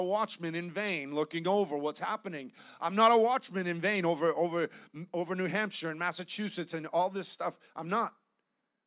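Speech, with nothing technically wrong.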